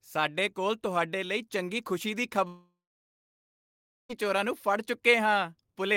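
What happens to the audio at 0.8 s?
Nothing goes wrong at 0.8 s; the speech there is intact, with no dropout, click or distortion at that point.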